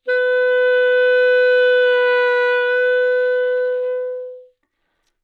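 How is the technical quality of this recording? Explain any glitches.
No glitches to report: the everyday sound in this recording carries no audible dropouts, clicks, distortion or other transport or processing faults.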